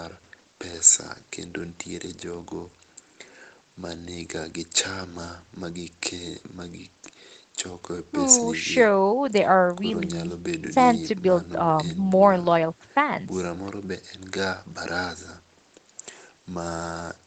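No technical faults can be heard in the speech. It carries the band limit of a call path, with nothing above about 8 kHz, as an Opus-coded call at a wideband setting would give.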